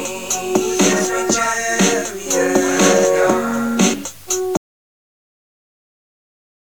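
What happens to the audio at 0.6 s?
Nothing goes wrong at 0.6 s; the sound is intact and carries on without any dropout, click, glitch or other fault at that point.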